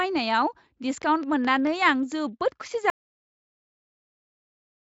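From 1.02 s to 2.13 s there's a train of clicks running over the speech: a steady ticking at about 4.5 per second, evenly spaced, roughly seven in all, each the same sharp pop and noticeably louder than the speech. That regular spacing and identical shape point to something injecting a pulse on a schedule, likely interference from nearby gear or a faulty connection or power supply, rather than anything in the recorded sound.

Then at 2.90 s the audio drops out to silence and stays dead right to the end. It's plain silence, with no room tone or hiss, so the input was lost, likely through a disconnect, a failed link or an accidental mute, while the recorder kept writing blank samples. Whatever was said after that point is simply gone. The Speex coding itself sounds clean, with the band topping out near 7.6 kHz.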